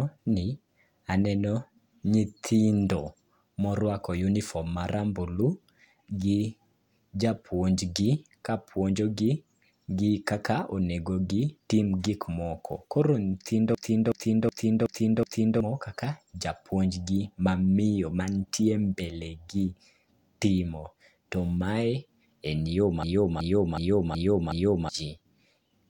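The playback system froze twice while the sound hardware kept replaying its ring buffer, a system hang loop. From 13.75 to 15.60 s, one 0.37 s slice repeats exactly five times at about 2.7 per second, a fit with a 16384-sample buffer, giving a mechanical stutter. It recurs right after "mae en yo", from 23.03 to 24.89 s, identically. Each hang loses around two seconds of audio.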